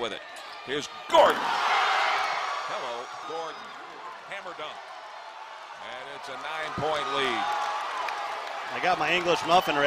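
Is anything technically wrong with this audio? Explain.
Yes. Damaged data in a compressed stream at 3.23 s: corrupted bytes make the decoder misread the frame there, lose sync and search for the next valid header. The result is a brief chirp or blip.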